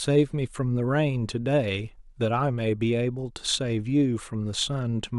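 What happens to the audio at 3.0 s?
Nothing goes wrong at 3.0 s; the speech carries on intact through that moment, with no dropout, click or distortion.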